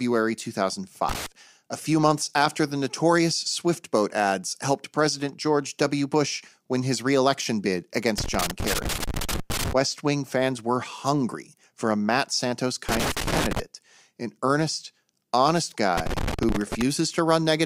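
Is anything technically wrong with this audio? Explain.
Yes. Loose connector crackle breaks into the speech four times: 1.09 to 1.26 s, 8.18 to 9.73 s right after "win his reelection bid", 12.89 to 13.60 s just before "an earnest honest", and 15.97 to 16.82 s following "an earnest honest". A worn or dirty contact in the cable path is making and breaking as it shifts, chopping the signal on and off. Each burst comes through as irregular scratchy crackle.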